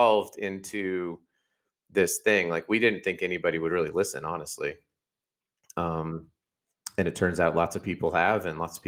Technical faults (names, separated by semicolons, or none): none